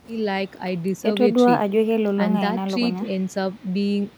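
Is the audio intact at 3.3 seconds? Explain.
Yes, the speech at 3.3 seconds plays through intact, with no dropout, click, distortion or other fault at that moment.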